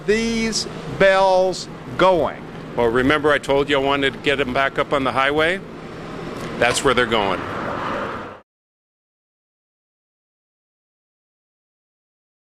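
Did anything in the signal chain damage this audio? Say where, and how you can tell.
Yes. A filter restarted on every block in the buffer-processing stage adds a buzz of 188 Hz for the whole clip, which fits 256-sample blocks at 48 kHz. Each block starts from silence with a small transient. Unlike mains hum, the buzz rises and falls with the signal's level.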